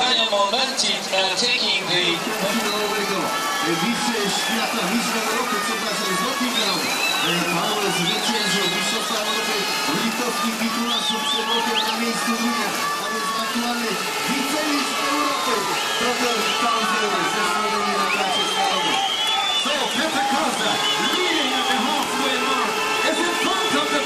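Overlapping chunks: each 6 s chunk begins 25 ms early, replaying that slice as a brief stutter at 3.98–4.01, 16.03–16.06 and 22.06–22.08 s.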